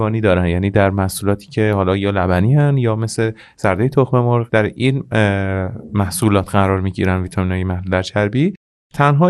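From start to finish the speech carries MP2 compression damage, likely from MPEG Layer II coding at a low rate, which fits roughly 80 kbps. Short of bits, the encoder switches off upper sub-bands and coarsely quantises the rest, so the speech sounds dull, with a gurgling, granular grit. On a spectrogram the top is cut away and high bands blink on and off in blocky patches.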